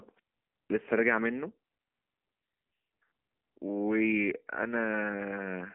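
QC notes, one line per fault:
Throughout: AMR narrowband mobile codec. The speech passes through a 150 Hz to 3.4 kHz phone band, with nothing above 3.5 kHz. Damage is plainly audible as buzzy, synthetic-sounding speech. A pulse-driven vocal tract model at 7.4 kbps cannot carry fine detail.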